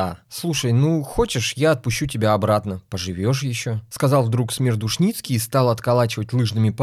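A speech recording with no technical faults to report.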